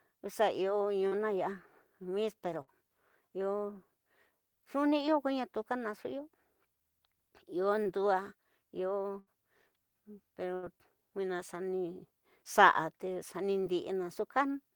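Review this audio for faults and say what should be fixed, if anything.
Short concealed packet loss occurs at 1.07–1.14 s (about 41 ms bridged), 4.89–4.93 s, 7.83–7.87 s and 13.61–13.65 s (roughly 20–26 ms each). At each point a sliver of speech arrived too late. The receiver extrapolated the preceding sound and then crossfaded back, leaving a brief smear or wobble. On a spectrogram, harmonics run flat and slightly blurred across the gap. The waveform shows a too-regular repeated cycle where detail should vary.

A burst of packet loss occurs at 2.62–2.69 s (about 57 ms filled), 9.19–9.28 s (about 71 ms) and 10.54–10.65 s (about 82 ms). Several consecutive packets went missing, so concealment held the last sound and faded it. A voiced buzz or hiss decays, then speech resumes with a chunk skipped. Spectrograms show smeared, frozen harmonics or noise that dims toward the gap's end, then an abrupt onset. 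The waveform envelope sags across the span.

To prevent both, enlarge the adaptive jitter buffer and add forward error correction or redundancy on the lossy network path.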